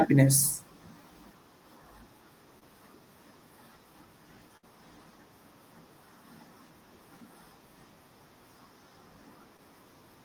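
A speech recording with packet-loss artefacts in three places. Short concealed packet loss occurs at 2.59 to 2.63 s and again at 9.57 to 9.60 s. Each time about 20 ms of audio failed to arrive in time, and the receiver papered over it with roughly 15 ms of synthesized continuation, extending the preceding sound before cross-fading back into the real signal. The result is a brief smear or wobble rather than an audible dropout. A burst of packet loss sits at 4.57 to 4.65 s, where about 60 ms went missing in a row. Concealment stretched the last sound out for about 58 ms while attenuating it, giving a short held buzz or fading hiss before the stream picks up again further along, with the intervening audio simply absent.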